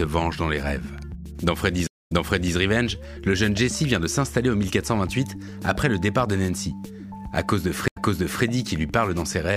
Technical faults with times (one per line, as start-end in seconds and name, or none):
1.87-2.55 stream reconnect
7.88-8.43 stream reconnect